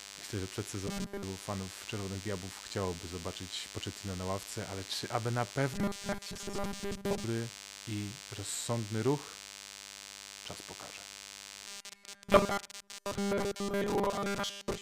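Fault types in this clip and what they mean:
DECT cordless phone buzz: A thin, steady buzz sits under the speech for the entire clip, at about 15 dB below it. A nearby DECT handset or base sends a radio burst every 10 ms, and the audio circuitry rectifies it, giving a 100 Hz fundamental with many harmonics. On a spectrogram this shows as a comb of evenly spaced horizontal lines running unbroken from start to finish. The waveform carries a regular 10 ms pulse pattern, visible in pauses.
Robotic sound from repeated short buffers: The speech turns rigid and metallic with a fixed 200 Hz buzz from 0.87 to 1.23 s just after "że przed", from 5.74 to 7.24 s after "ale czy aby na", and from 11.68 s to the end. The likely cause is new audio arriving too seldom, so a 5 ms fragment is looped and most of the real audio is skipped. A spectrogram shows rigid 200 Hz harmonic lines replacing natural formant movement, and the waveform shows identical repeating 5 ms cycles.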